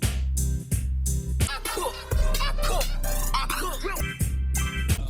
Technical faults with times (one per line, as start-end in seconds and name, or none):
1.76-5.09 adaptive stream at a lower bitrate